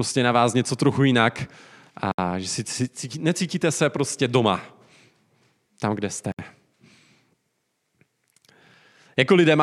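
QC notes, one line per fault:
2.12–2.18 s and 6.32–6.39 s: gap at a join of encoded pieces. Speech breaks off in a 64 ms gap before "že si cítí necítíte" and a 67 ms gap after "tam kde". Untrimmed encoder delay and end padding remain at each join. The codec smears the edges, so the silent part is shorter than the gap, and speech carries on from where it stopped.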